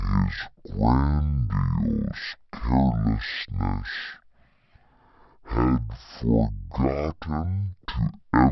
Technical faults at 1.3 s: wrong sample rate

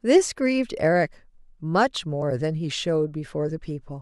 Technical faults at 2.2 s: damaged data in a compressed stream

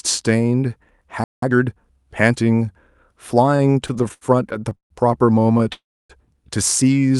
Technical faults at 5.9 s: call audio freeze

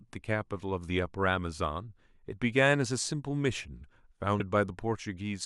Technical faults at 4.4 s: compressed frames skipped

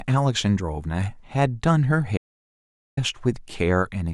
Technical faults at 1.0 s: none

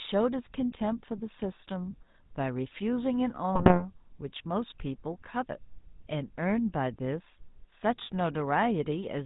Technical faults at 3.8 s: GSM full-rate codec; GSM bit errors

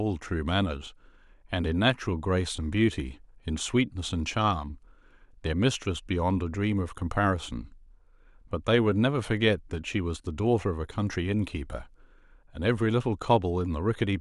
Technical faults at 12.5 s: none

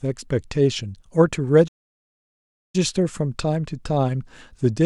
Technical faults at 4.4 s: none

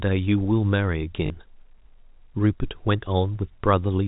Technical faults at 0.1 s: none

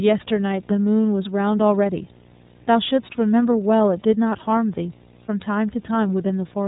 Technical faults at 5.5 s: video or display buzz; iLBC codec

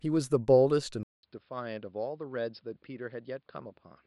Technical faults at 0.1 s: none

